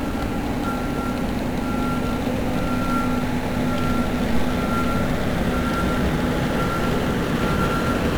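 From start to finish the audio carries heavy 1-bit DFPWM compression damage: each sample is reduced to a single up-or-down step on an adaptive level, so dense broadband quantisation noise rides over everything. The result is fuzzy and crackly, with treble submerged in hiss, consistent with roughly 48 kbps.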